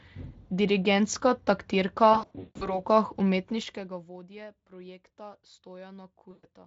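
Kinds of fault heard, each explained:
VoIP packet loss concealed by the speech codec: lost packets were bridged by the decoder repeating its last pitch and filter at falling gain, so speech smears into fading buzz, scattered from 2.13 to 2.8 s, longest gap 160 ms, and again at 6.31 to 6.46 s.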